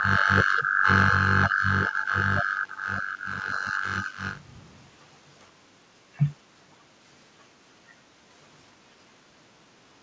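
From 4.4 to 4.95 s, a very faint echo leak trails the speech by about 505 ms, likely loudspeaker pickup that the far end's echo canceller failed to remove, over an 8 kHz-limited wideband call path.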